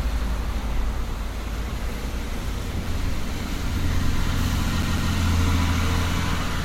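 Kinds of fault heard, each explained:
CD stuck on one turn: a scratch sends the laser back one track at the same point on each rotation, so a single 0.15 s slice of the sound replays with a brief mute at every jump. Here it happens twice between 4.82 and 5.13 s, giving a quick, even stutter. On a spectrogram, identical 0.15 s blocks sit side by side, separated by thin vertical gaps. The waveform shows the same shape copied at a fixed spacing.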